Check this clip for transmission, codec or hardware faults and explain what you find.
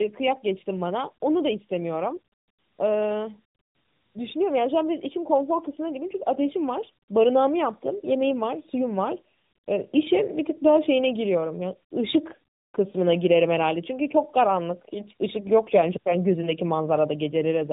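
One fault is present: tandem speech coding, audible for the whole clip. The speech has passed through two low-rate speech coders in succession, most likely AMR-NB-type narrowband coding on each side of a plain telephone-grade link. Each stage re-encodes audio the previous one had already degraded, so the losses compound. Nothing remains above about 3.8 kHz, and the speech sounds muffled, rough and warbly, more so than a single narrowband coder would produce.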